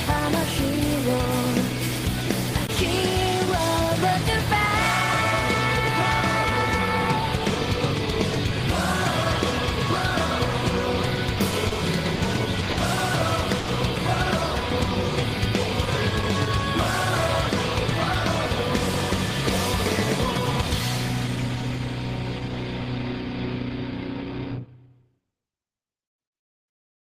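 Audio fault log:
11.68, 12.15, 12.71 and 13.59 s: short stalls from late packets. The buffer ran dry and the last sound was held for 30, 40, 60, then 80 ms, with nothing actually lost.
20.61 to 21.77 s: jitter buffer speed-up. Small pitch-period chunks were trimmed, around 70 ms in all, so the audio runs about 6% fast at the same pitch and feels a bit rushed.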